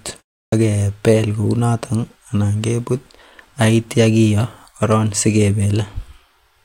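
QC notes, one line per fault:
0.45–0.52 s, clipped start after a pause: after about 0.31 s of silence the output path has gone idle and needs 74 ms to wake. The opening of "ak kebel kounoton" is swallowed, so the speech jumps in abruptly without its first sounds.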